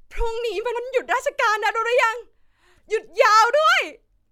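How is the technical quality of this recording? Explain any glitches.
A single short glitch stands out. At about 0.75 s there is a brief glitch, lasting about 14 milliseconds, as the speech is briefly disrupted. This is damaged data in a compressed stream: some bytes in that stretch of the encoded file were corrupted, so the decoder misread the affected frame, lost its place in the bitstream and had to hunt for the next valid frame header before normal playback resumed.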